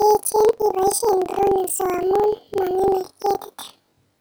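Speech sounding an octave high with a 23.4 Hz flutter throughout: planar audio read as interleaved, each 42.67 ms block, which fits 2048-sample blocks, playing twice at double speed.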